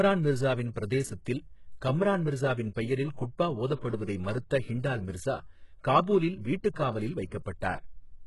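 Throughout the speech, the treble sounds synthetic. S sounds come out gritty and metallic. Nothing reaches above 11.5 kHz. The damage is heavy. This is likely HE-AAC compression, which rebuilds the top band from copied lower bands. Its depth fits a bitrate near 12 kbps.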